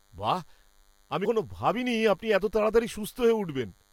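Speech with a DECT cordless phone buzz throughout: a thin, steady 100 Hz buzz rich in harmonics, faint at roughly 40 dB below the speech. A nearby DECT phone's 10 ms radio bursts are being rectified, which makes it sound raspier than smooth mains hum. At 1.24–1.26 s, just before "ভাবিনি আপনি এত", compressed frames were skipped. The audio jumps ahead around 100 ms, which fits about five lost frames.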